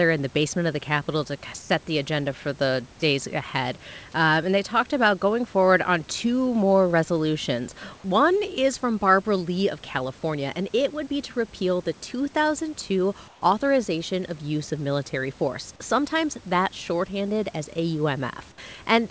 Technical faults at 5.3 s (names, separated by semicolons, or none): none